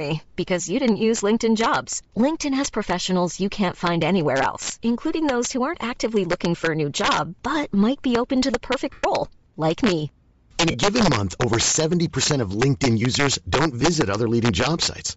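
Throughout the speech, integer overflow drives loud peaks about 6 dB past full scale. A small fraction of samples wrap to the opposite sign, producing harsh cracks sharper than clipping's flattened buzz. A breathy, grainy haze over the upper spectrum is also plainly audible throughout, likely Bluetooth LC3 compression, which thins out the highs and fills them with noise.

Lost LE Audio frames occur from 8.92 to 9.04 s, after "be open to the" and before "like me". For 112 ms the decoder repeats the last spectrum with scrambled phase, so the sound smears into noise and fades rather than cutting cleanly as a dropout would. A shorter 30 ms smear follows at 10.71 to 10.75 s, just before "given month over".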